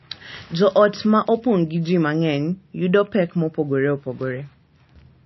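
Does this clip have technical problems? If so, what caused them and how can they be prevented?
Yes, heavy MP3 compression throughout: nothing above 5.8 kHz, watery swirling speech, likely a bitrate around 26 kbps. Encode at 128 kbps or more to avoid it.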